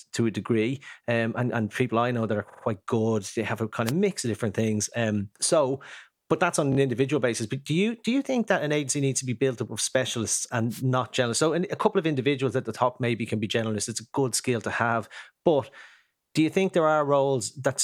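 At 2.49 to 2.63 s the speech stutters from repeated frames: a block of about 46 ms, which fits two compressed frames, plays three extra times. The decoder receives the same data again, so the sound jumps back and runs about 139 ms longer.

At 3.85 to 3.92 s a wireless microphone noise hit breaks through as a brief swish of static. Reflections partly cancel the FM radio signal at the receiver, and the receiver's noise floor rises over the speech for that instant.

At 6.71 to 6.76 s there are repeated frames again, shorter this time. A block of about 23 ms, consistent with a single frame, plays twice more. This adds 46 ms.

At 10.70 to 10.82 s a second wireless microphone noise hit occurs. It is longer, at about 125 ms, so the burst of static lasts longer as the signal fades and recovers.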